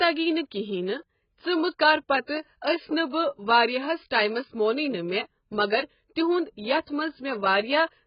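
Speech with AAC compression damage throughout: nothing above 5.1 kHz, smeared, warbling sibilants, likely from AAC-LC at a very low bitrate, around 12 kbps.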